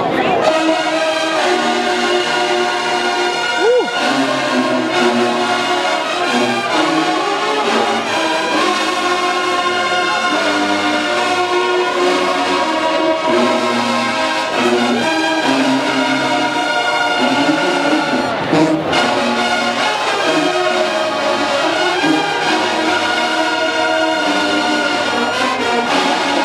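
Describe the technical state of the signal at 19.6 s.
The signal at 19.6 s is intact, with no audible fault at that moment.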